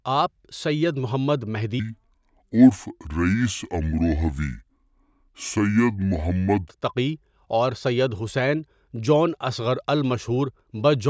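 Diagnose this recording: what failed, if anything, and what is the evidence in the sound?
Between 1.80 and 6.69 s, after "آپ سید محمد", speech drops 7 semitones and slows to two-thirds speed: a wrong sample rate at playback, 24 kHz audio clocked at 16 kHz.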